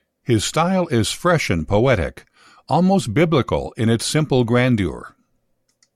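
No technical faults are audible anywhere in the speech recording.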